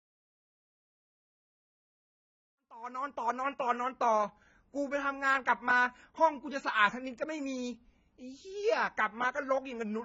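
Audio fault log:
Throughout: AAC compression. The speech has nothing above 7.5 kHz, so it sounds dull and smeared, and the damage is heavy. Sibilants turn fizzy and sustained vowels warble, because a low-bitrate encoder like AAC-LC starves the upper bands, leaving gaps or noise-filled patches. The likely cause is AAC-LC at very low bitrate, in keeping with roughly 16 kbps. The same texture runs through the smooth fade-in from around 2.5 s to 3.47 s.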